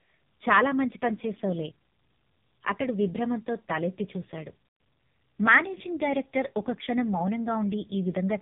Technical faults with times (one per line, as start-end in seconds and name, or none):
0.00-8.42 AMR narrowband mobile codec